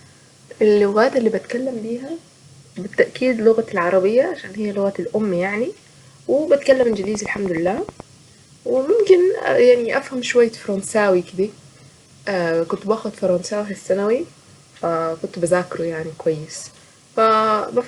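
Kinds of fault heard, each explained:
Train of clicks: A run of short, sharp pulses sits on top of the speech from 6.72 to 8.01 s. They tick at a steady 9.3 per second, around fifteen in all, each with much the same shape. Their peaks stand about 5 dB above the speech, so they cut through clearly and carry on into gaps between syllables. The likely source is electrical interference or a faulty connection or power supply.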